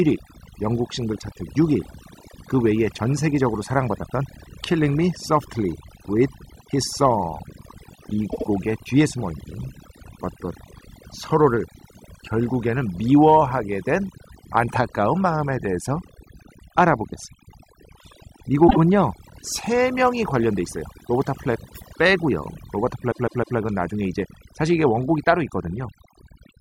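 Throughout, overdone noise removal cuts individual frequency bands far down or off wherever they fall near the noise estimate. The background sinks and breaks into twinkling, warbling specks, and quiet parts of the speech vanish with it. Codec warble, by contrast, would not thin the background like this.

Repeated frames stutter at 8.30 s, where a 78 ms block plays twice more; at 18.67 s, with a 26 ms block twice more; and at 23.11 s, with a 157 ms block three more times. Each is an exact replay, not an echo or gap, and adds its duration.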